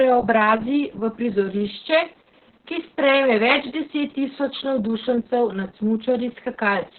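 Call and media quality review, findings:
Opus voice compression, heavy, whole clip. Speech muffled and hoarse with a slightly robotic edge. Nothing above about 4.3 kHz, so narrowband. SILK coder starved of bits, excitation coded coarsely, consistent with roughly 6 kbps. Probable component: encoder bitrate config on the voice path.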